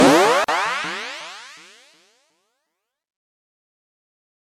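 At 0.44 s a gap at a join of encoded pieces opens: a gap of about 41 ms, ending at 0.48 s. The pieces were encoded separately and joined untrimmed, so encoder start delay and final-frame padding remain. The dropout has smeared edges, then the sound resumes where it stopped.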